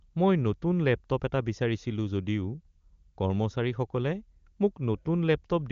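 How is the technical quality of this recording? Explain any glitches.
No glitches turn up anywhere in the recording; the speech comes through the AMR wideband (HD Voice) codec at its top rate of 23.85 kbit/s, with the band ending at about 7.3 kHz as that codec is designed to do.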